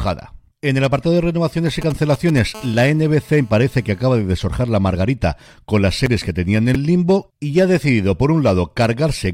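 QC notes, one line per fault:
1.82–2.39 s, GSM signalling bursts: a nearby 2G phone, in signalling mode, sends short clusters of radio bursts at about 217 Hz that the audio circuitry rectifies, giving a galloping dit-dit-dit of brief buzzes, roughly 15 dB below the speech, right after "apartado de renovaciones y".
2.55–4.22 s, GSM phone buzz: a nearby 2G phone, now in a call, transmits continuous bursts 217 times a second, and rectification of those pulses turns into a steady, hard, raspy buzz rich in harmonics, about 27 dB below the speech, ending just before "desorjar la margarita con".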